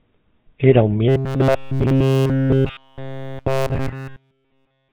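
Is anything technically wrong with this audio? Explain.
Yes, there are two faults.

Throughout the speech there is GSM full-rate codec damage, plainly audible. The codec drives a vocal-tract model with sparse, regular pulses and fits 13 kbps, leaving nothing above 4 kHz. The result is gravelly buzz plus dullness, unlike simple band-limiting, which only muffles.

From 1.09 s to the end, the speech turns into robotic sound from repeated short buffers: a rigid metallic drone at 134 Hz that only loosely tracks the words. Almost nothing new gets through. The likely cause is the player looping a chunk of about 7.5 ms, whose repetition sets that fixed pitch. GSM roughness, by contrast, follows the talker's own pitch.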